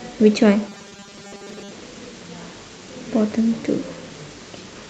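From 0.69 s to 1.72 s the speech goes robotic, with a rigid, metallic buzz pinned at 200 Hz. That points to repeated short buffers, likely 5 ms chunks replayed whenever fresh audio arrived late, so most of that stretch is repeats rather than real signal.

Inside that, around 0.89 to 0.93 s, there's a short concealed packet loss. About 20 ms never arrived, and the receiver papered over roughly 15 ms by extending the previous sound before blending back in, which leaves a quick smear or wobble.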